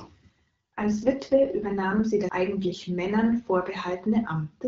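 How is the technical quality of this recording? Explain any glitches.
The recording is wideband telephone speech with light codec coloration, consistent with AMR-WB at 12.65 kbit/s. It contains two distinct glitches.

From 0.79 to 2.04 s there is an AMR rate drop. The speech turns rougher, more buzzy and synthetic. The bandwidth does not narrow and there is no gap in the audio. This pattern fits the network stepping the codec down from 12.65 to about 6.6 kbit/s on a weak radio link, leaving fewer bits for the speech model and more for error protection. At 2.04 s the rate recovers and the texture returns to its earlier state.

At 2.29 s there is a CD skip. A very short mute, only a few milliseconds, produces a small tick, and playback then resumes from a different point in the material, so the continuity of the sound jumps abruptly. This happens when the pickup laser is jolted or hits a disc flaw and lands on another turn of the spiral track. 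The player briefly mutes and then carries on reading from the new position.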